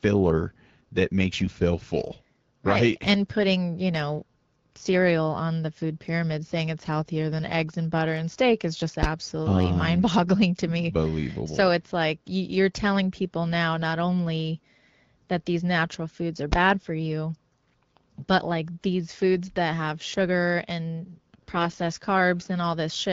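From 1.45 to 1.57 s the speech turns hoarse and gargly while keeping roughly its pitch and level. These are AMR bit errors: over this stretch, which points to about six corrupted frames, a few percent of the less protected bits arrive flipped. The checksum on the important bits still passes, so the decoder places excitation pulses wrongly and misreads the fine pitch, gain and spectral values.

At 9.03 s and again at 16.52 s there is a single hard bang. Each is a case of invalid numbers at full scale: a calculation produced infinite or invalid values, and these were clamped to the largest positive or negative sample. The output is pinned at one extreme value for a block of about 10 ms, too short to hear as separate onset and release pops.

From 21.50 to 21.76 s the AMR bit errors return over a longer stretch, consistent with roughly thirteen damaged frames. The error rate is lower, around one to two percent, and the speech again turns scratchy and gargly. 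Around these faults the light coding character fits AMR-WB at about 12.65 kbit/s.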